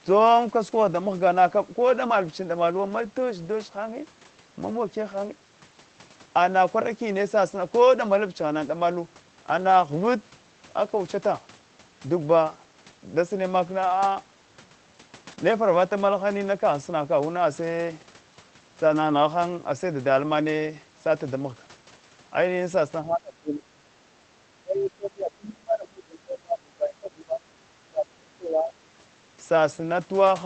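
At 15.31 to 15.33 s there's a lost packet rebuilt from error correction: one 20 ms packet went missing, but the next one carried a low-bitrate spare copy, so the decoder played that instead. No gap, just a rougher, noisier patch of speech.

Right after, from 15.35 to 15.39 s, there's a short concealed packet loss. About 20 ms never arrived in time, and the receiver stretched the preceding sound across roughly 12 ms before blending back in. It comes across as a quick smear or wobble.

Later the speech drops in level by up to about 25 dB, sometimes losing its top end or chopping into pieces, at 23.04 to 23.79 s, 24.63 to 27.46 s and 27.85 to 28.75 s. That's likely speech suppressed in double talk: the echo canceller couldn't tell the talker from the far side's echo while both were speaking, so it pulled everything down.

Underneath it all, the Opus call path caps the bandwidth at 8 kHz and runs at 24 kbps.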